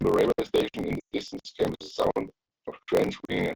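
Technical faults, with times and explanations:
Throughout, block size mismatch (truncated): a stage reads 1024-sample blocks while discarding each block's tail, leaving a 43.1 Hz buzz and speech running 1.12 times fast.
0.99–1.12 s, lost AMR speech frames: a 140 ms run of failed frames made the decoder repeat old settings with falling gain, so the speech drops to near silence within two frames, then returns weak.
3.25–3.38 s, lost AMR speech frames: 40 ms of frames scattered over 140 ms were concealed from earlier frames, giving a brief drop toward silence before the speech recovers roughly.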